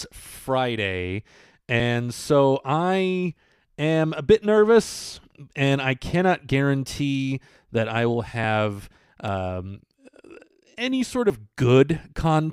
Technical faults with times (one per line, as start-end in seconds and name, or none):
1.80 dropped buffer (overrun)
8.44 dropped buffer (overrun)
9.28 dropped buffer (overrun)
11.30 dropped buffer (overrun)